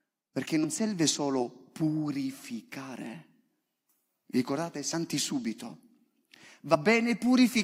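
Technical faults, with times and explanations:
0.63–0.65 s, 4.93 s and 6.74–6.76 s, compressed frames skipped: the decoder drops whole compressed frames, either missing from the stream or rejected as damaged, so playback jumps forward. The first and last gaps lose about two frames, around 50 ms, and the middle one about one frame, roughly 20 ms, consistent with a 23.2 ms frame. The first join falls just before "serve solo purificare".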